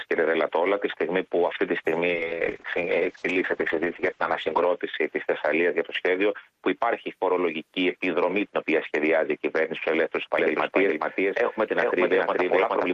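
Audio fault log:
2.12–4.85 s, call bitrate drop: the encoder was starved of bits, with the sound pointing to a fall from about 32 to 9 kbps. For roughly 2.5 s the coding turns coarse and watery, and the top end closes in from 12 kHz to 8 kHz, muffling it.
10.38 s to end, doubled audio track: a second full-band copy, about as loud as the first, trails by around 0.4 s with no decay or room colour, starting abruptly. The likely cause is a slower parallel capture path or an edit holding two offset copies.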